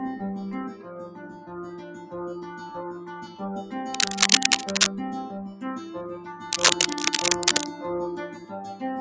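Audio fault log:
throughout – noise suppressor applied to music or sounds: a suppressor meant for speech stays active and mistakes steady tones, ambience and reverb for noise, swinging gain by around 10 dB. Attacks pass while held sound and tails sink, so the band-limited audio, with nothing above 8 kHz, pumps and thins.
0.73–1.55 s, 1.71–2.14 s, 2.45–2.62 s, 2.94–3.40 s and 8.30–8.52 s – sound cut by the noise suppressor: the suppressor judges these stretches to be noise and turns them down, by about 8, 7, 4, 7 and 8 dB at their deepest. Sustained or decaying sound sinks and its tails end early, while sudden onsets come through.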